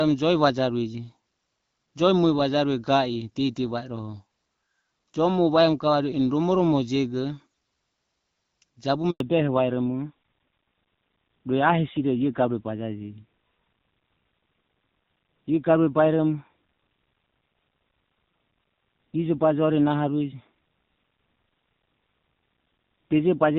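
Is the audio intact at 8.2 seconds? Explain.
Yes, at 8.2 seconds the speech is intact, with nothing there beyond the light coding damage of the AMR wideband (HD Voice) codec running at 12.65 kbit/s.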